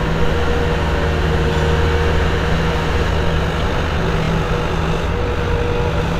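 Time-stretched section from 3.07 s to the end at 6.19 s: the audio suddenly runs about 1.89 times faster at unchanged pitch, sounding rushed, likely from software squeezing it to fit.

Repeated frames at 4.22 to 4.28 s: one 26.1 ms block is played twice more, adding 52.2 ms and producing a brief stutter.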